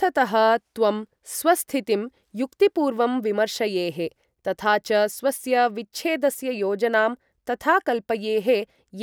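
No technical faults can be heard anywhere in the speech: the signal stays continuous and steady in level, with nothing interrupting or disturbing it.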